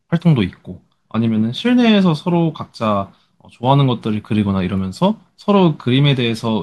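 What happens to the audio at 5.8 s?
Nothing goes wrong at 5.8 s; the speech continues intact there, with no dropout, click or distortion.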